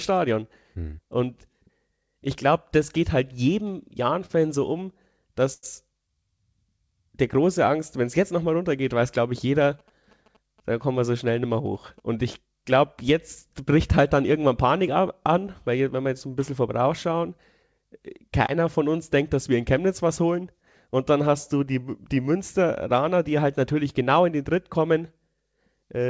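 Speech over a call path whose band stops at 8 kHz, which fits a wideband codec like G.722. Between 4.26 and 5.65 s there are repeated stalls (stutter): packets showed up late three times, the receiver stretched the last sound over the holes (the longest about 92 ms), and nothing's actually missing, it just drags. Overlapping that, from 4.85 to 6.16 s, a jitter buffer slow-down repeats pitch periods to rebuild its reserve, so the speech runs about 2% slow at the same pitch, adding 37 ms. From 9.41 to 12.0 s you get GSM signalling bursts, a nearby 2G phone's radio bursts rectified into a faint galloping dit-dit-dit of short buzzes at around 217 Hz, well below the speech. At 18.46 to 18.50 s there's a short concealed packet loss: 20 ms never arrived and was patched from the preceding sound, leaving a brief smear. Then from 19.86 to 21.19 s a jitter buffer speed-up trims pitch periods to cut excess delay, around 50 ms in total, so the speech runs about 3% fast.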